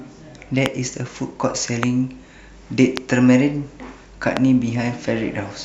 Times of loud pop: 0.66-0.68, 1.83-1.85, 2.97-2.99, 4.37-4.39

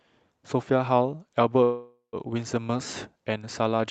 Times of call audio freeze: 1.63-2.16

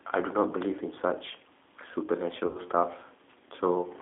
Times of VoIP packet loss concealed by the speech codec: 2.47-2.59

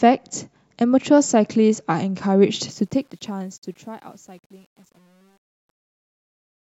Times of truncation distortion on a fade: 2.70-6.73

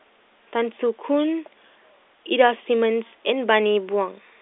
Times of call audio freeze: none

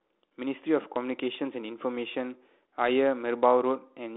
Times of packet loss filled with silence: none

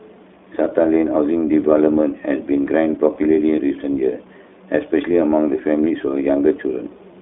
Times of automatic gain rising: none

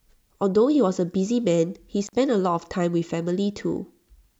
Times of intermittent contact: 2.07-2.13

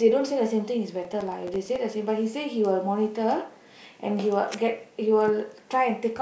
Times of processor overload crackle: 1.05-1.76

